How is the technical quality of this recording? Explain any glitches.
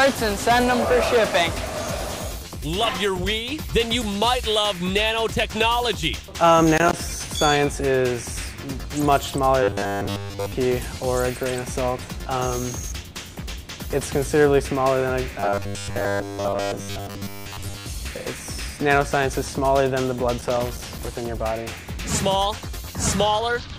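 The recording has two recurring faults: loose connector crackle in two places and a robotic buzz in two longer stretches.

Loose connector crackle occurs at 6.77 to 6.93 s and again at 20.40 to 21.16 s. A worn or dirty contact keeps making and breaking, chopping the signal, so each passage becomes an irregular burst of scratchy crackle.

Robotic sound from repeated short buffers runs from 9.63 to 10.52 s and from 15.40 to 17.86 s. The audio takes on a rigid, metallic buzz at 100 Hz. The likely cause is fresh audio arriving too late and a roughly 10 ms chunk being replayed to fill most of the gap.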